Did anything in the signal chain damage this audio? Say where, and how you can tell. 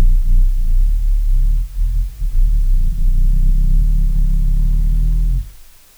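Yes. The damage happened at a sample-format conversion stage, where the audio was reduced to low bit depth with dither. From start to finish there is a constant, even hiss, about 35 dB below the signal, which fits an 8-bit word length. The hiss does not rise or fall with the material and adds no gritty distortion on quiet passages. That separates it from undithered truncation, whose error tracks the signal. Here the dither turned the rounding error into steady white noise.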